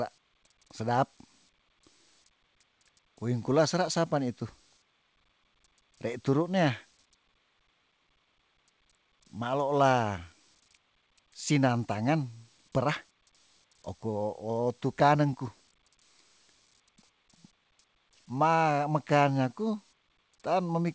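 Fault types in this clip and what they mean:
The speech comes through a call path that is working normally, with nothing above 8 kHz, which fits a wideband call codec such as G.722 at 64 kbps.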